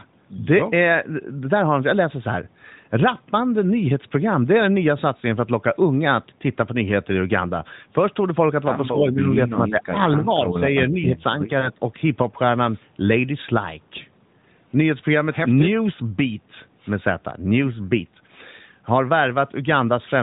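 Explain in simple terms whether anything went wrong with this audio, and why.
Something went wrong twice. Most likely, both sides spoke at once and the echo canceller muted this voice too: speech suppressed in double talk dips from 9.52 to 9.98 s, 10.17 to 10.51 s and 10.9 to 11.31 s, sharply at first, then less each time. Then, at 11.6 s, a radio error destroyed one speech frame. The AMR narrowband mobile codec, which also gives the whole clip its phone-line sound, patched over the lost AMR speech frame with a guess, heard as a brief dip or wobble.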